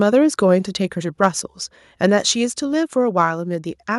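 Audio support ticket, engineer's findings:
Microphone volume stepped down at 1.02 s (about 3 dB) and 2.49 s (about 2 dB). Speech and background drop together, instantly, with no fade. Likely the call client's automatic input-gain control lowering the device volume after judging the level too hot. Waveform: envelope steps to a lower plateau at each point and stays there. Spectrogram: the whole band dims uniformly across a sharp vertical boundary, noise floor included.

Microphone overload at 1.24–1.26 s. Harsh, crackly edge on the loudest syllable. Peaks hit the converter limit (0 dB over), with around 2 percent of samples in that stretch clipped, likely from mic input volume set too high. Waveform: flat-topped, squared-off peaks. Spectrogram: brief vertical smear of broadband energy reaching into the high kHz range, above the normal harmonic structure.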